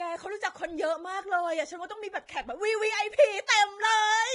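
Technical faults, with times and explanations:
Throughout, Vorbis compression: grainy, hissy treble and roughened tones, with nothing above 10.6 kHz, likely from heavy Vorbis coding fitting about 28 kbps; the spectrogram shows a hard ceiling and speckled highs.
3.47 s, pre-echo: a brief hiss arrives about 18 ms before a sharp onset as block-wide quantisation noise leaks backward; the waveform shows fuzz before the attack.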